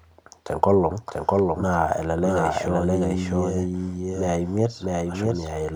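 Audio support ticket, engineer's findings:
Doubled audio track, whole clip. Speech repeats about 0.7 s behind itself, copy roughly as loud as the original. Copy is full-band, dry, no decay or room tone. Likely a second capture path or edit layering two out-of-step copies.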